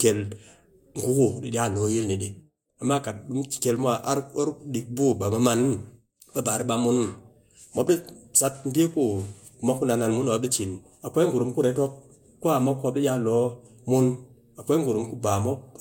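Low-bitrate audio saved at a high bitrate, throughout: nothing above 16.6 kHz, likely an earlier low-bitrate Vorbis encode whose losses the later high-bitrate MP3 cannot restore.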